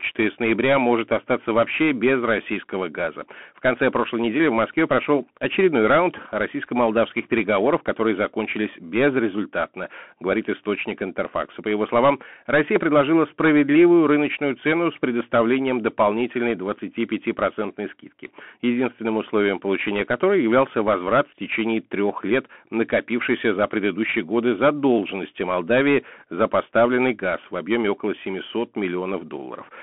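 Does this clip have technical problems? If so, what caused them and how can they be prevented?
Yes. Throughout the speech the audio shows Bluetooth CVSD headset codec damage. The band runs from about 200 Hz to 3.4 kHz, with nothing above 3.8 kHz, so the speech sounds telephone-thin. CVSD codes each sample as a single up-or-down bit at a rate that fits 64 kbps, with an adapting step size. Fast, loud high content outruns the step, giving scratchy s sounds and a granular hiss under the speech. To prevent it, record on a wired microphone or a Bluetooth link using a wideband or higher-quality codec rather than the headset profile.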